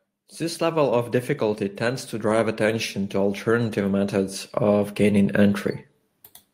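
A speech recording with automatic gain rising from about 0.38 s to 5.64 s: the gain control judges the input too quiet and steadily pushes it up by about 10 dB, so the voice and the background noise swell together over those five seconds.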